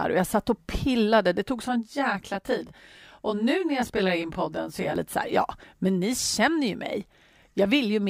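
From 1.66 to 4.96 s, channel delay (comb filtering): one channel lags around 20 ms before the mono sum, making it rough or slightly doubled.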